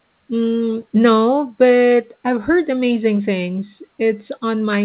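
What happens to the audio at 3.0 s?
Nothing goes wrong at 3.0 s: the speech continues without a break or glitch, with only the narrowband sound of the call path, which has nothing above 4 kHz and fits a G.711 A-law call at 64 kbps.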